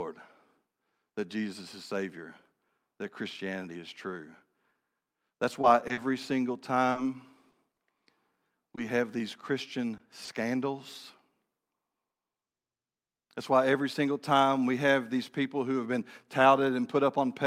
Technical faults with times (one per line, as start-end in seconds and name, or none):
5.61-8.79 scattered short gaps
9.97-10.29 short concealed packet loss